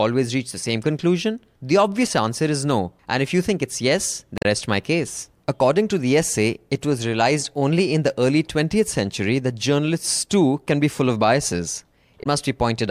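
A speech recording with two short bursts of damaged data in a compressed stream, one at 4.38 to 4.45 s and another at 12.20 to 12.26 s, each lasting about 70 ms. Both come through as quick glitches. What's going on is that a stretch of the coded bytes got corrupted, so the decoder misreads those frames, loses sync, and has to hunt for the next valid frame header before clean audio picks up again.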